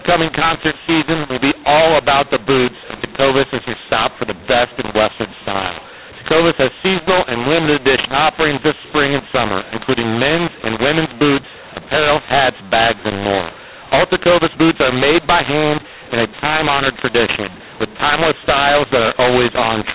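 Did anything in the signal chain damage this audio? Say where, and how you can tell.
Yes. The damage is at the codec decoding stage, throughout the clip: a mu-law and A-law mix-up. The speech is A-law coded but read as mu-law. Levels scramble, so the speech sounds harsh and distorted, and the quietest samples rise into audible noise in the pauses.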